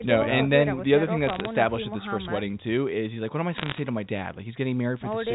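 Short, sharp ticks and a patch of crackle ride over the speech from 1.27 to 1.45 s, then a denser burst returns from 3.56 to 3.79 s. These are bit errors on a digital phone line. Flipped bits in the telephone-coded stream each corrupt a single sample, and a hit on the sign or an upper bit throws that sample far enough to click. The second burst points to roughly twice the error rate of the first, still under one percent.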